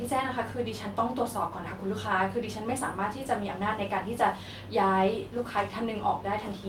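A short speech recording whose signal carries no audible technical fault anywhere in its duration.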